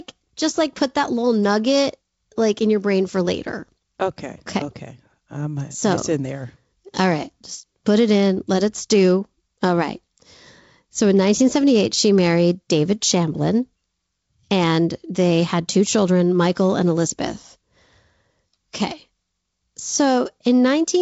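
Nothing faulty can be heard in this speech recording.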